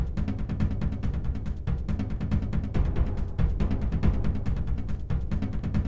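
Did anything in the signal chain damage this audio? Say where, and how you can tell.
No; the call path passes the sound without damage.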